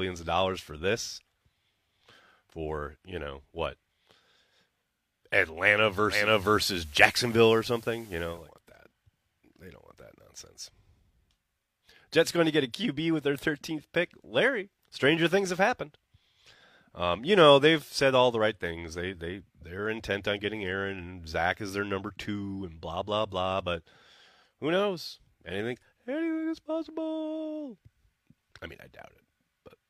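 From 6.05 to 8.53 s, digital radio blending to analogue cross-fades over 0.32 s to FM, bringing faint hiss and a level shift of about 2 dB rather than a dropout's silence.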